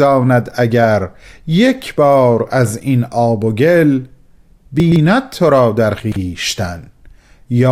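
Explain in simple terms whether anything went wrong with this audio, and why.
Two quick jumbled blips, at 4.8–4.96 s and 6.0–6.16 s: chunks out of order. In each, a 40 ms piece arrived three chunks late and played after the ones meant to follow it.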